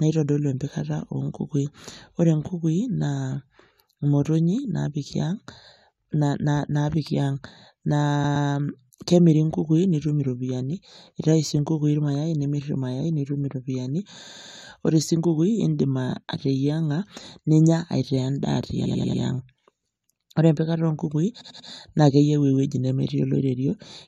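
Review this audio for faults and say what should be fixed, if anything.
The speech stutters from repeated frames at 8.23 s, 14.25 s just after "nitum iropiani", 18.84 s, and 21.40 s just before "naake eyeu ewueji". Each time a short block of compressed audio is played again: a 116 ms block twice more, then 93 ms blocks four, four and three more times. You hear a quick loop. Those block lengths point to frames of about 23 ms. Checking the writer or transport for duplicated frames should stop it.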